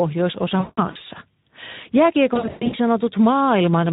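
Speex codec damage is plainly audible across the whole speech clip. The coding is consistent with a low-to-middle setting near 11 kbps, leaving the CELP excitation short of bits. Voiced sounds come out hoarse and noisy, and whatever sits above 4 kHz is a shaped hiss rather than real detail.

VoIP packet loss concealed by the speech codec follows at 0.59–1.01 s. About 240 ms of audio is missing, scattered over 400 ms, with the longest gap near 180 ms. Over each gap the decoder repeats its last pitch and filter at falling gain, stretching the sound into a fading buzz or coloured noise. At 2.33–2.76 s about 300 ms is lost over 400 ms, with runs up to 120 ms. The same fading concealment appears, and the voice stays weak and distorted for a short while after packets resume.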